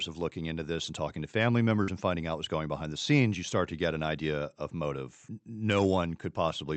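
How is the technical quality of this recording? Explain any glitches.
The speech carries one glitch, plus the band limit of the call codec, which cuts everything above about 8 kHz. Between 1.83 and 1.91 s, after "and talking to family" and before "and finding out what's", there is a short concealed packet loss. About 40 ms of audio never arrived, so the receiver extrapolated the preceding sound and crossfaded back. It is heard as a brief smear or wobble. A spectrogram shows stretched, blurred harmonics there, and the waveform shows unnaturally repetitive cycles.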